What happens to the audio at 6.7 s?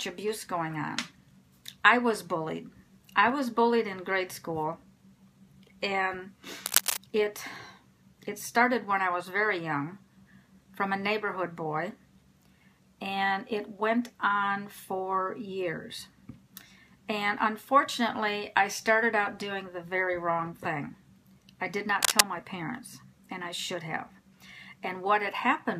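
From 6.66 to 6.97 s a burst of cable scratch noise rasps over the sound at roughly its own level, likely a worn cable or connector shifting contact. The waveform shows dense, ragged spikes, and the spectrogram shows broadband speckled streaks across that span.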